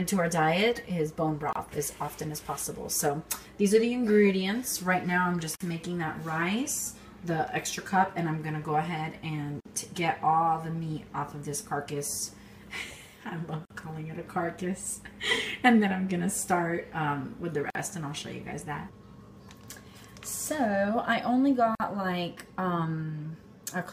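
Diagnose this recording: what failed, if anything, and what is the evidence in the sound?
Gap at a join of encoded pieces, at 1.53, 5.56, 9.60, 13.65, 17.70 and 21.75 s, a codec-stage failure. Continuous sound drops into silence with smeared edges, then resumes where it stopped. The first gap lasts about 26 ms and the rest 49 ms each, repeating every 4.0 s. That spacing points to segments encoded separately and concatenated untrimmed, so each join keeps one run's end padding plus the next run's start-up delay.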